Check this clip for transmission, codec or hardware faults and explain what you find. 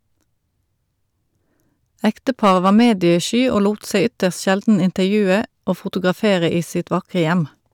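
There's one fault in this speech clip: hard clipping from 2.05 to 3.14 s. The level runs about 6 dB past what a stage can pass, so the peaks get sliced flat. Those squared-off tops throw harmonics way up high, adding distortion to the peaks in that stretch.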